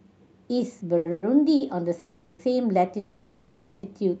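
Speech carried over a call link, with audio limited to about 8 kHz, suffers two kinds of fault. Short stalls from late packets occur at 0.97–1.07 s and 1.56–1.62 s: a packet arrived after its slot, the jitter buffer emptied, and the receiver held the last sound for about 80 ms and 40 ms, producing a faint buzzy drawl before speech resumes with nothing lost. Three call audio freezes occur at 1.11–1.24 s, 1.99–2.41 s and 2.99–3.85 s, likely caused by packets held up in transit draining the buffer. Each one fills the wait, 110 ms, 400 ms and 840 ms respectively, with a fading buzz or hiss that never drops to full silence, and each pushes the rest of the speech later.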